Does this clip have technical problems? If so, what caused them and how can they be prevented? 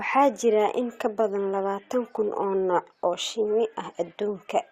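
No, this clip has no technical problems, so there is nothing to trace or prevent.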